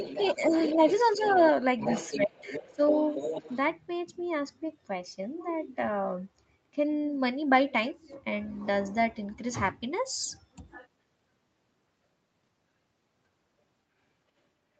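Right from the start, from 0 to 1.52 s and again from 1.79 to 3.56 s, you can hear the other side's voice leaking through, sitting roughly 10 dB under the talker. That's likely a loudspeaker echo the canceller didn't fully scrub from the mic.

While both voices overlap, the talker gets speech suppressed in double talk, with shallow dips of about 5 dB at 0.36 to 0.53 s, 0.74 to 0.78 s and 1.17 to 1.4 s. Then come deeper cuts, about 25 dB at 2.16 to 2.37 s and about 15 dB at 2.59 to 2.8 s, likely the canceller ducking everything when it couldn't tell the two apart.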